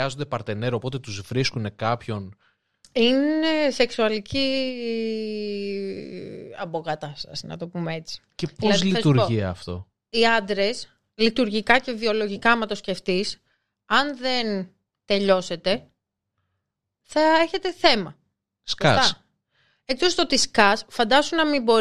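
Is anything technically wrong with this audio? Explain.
No, nothing technically wrong can be heard here.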